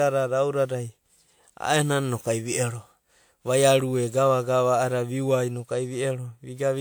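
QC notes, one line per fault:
Throughout, generation loss: the speech sounds swirly, smeared and hollow, and consonant attacks are blurred. This is likely from around three passes of lossy re-encoding, consistent with WMA 1 near 96 kbit/s. On a spectrogram there are speckled noise, scattered holes and nothing above 20.1 kHz.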